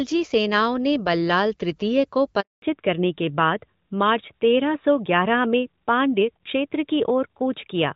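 At 2.40 s the speech cuts out in a handover gap lasting 220 ms, until 2.62 s. The call was being passed between networks, and no speech frames arrived during the switch. The sound decays within a few tens of milliseconds, leaving silence, and anything spoken in that span is lost.

From 2.62 s to the end, there is a fallback to narrowband. Before this point the sound has the clarity expected of HD Voice, with light codec damage that fits AMR-WB at 12.65 kbit/s. After the new link is established, the call is carried by a narrowband codec, likely AMR-NB at 12.2 kbit/s, and nothing remains above 4 kHz. The speech becomes duller and rougher, and sibilants lose their edge.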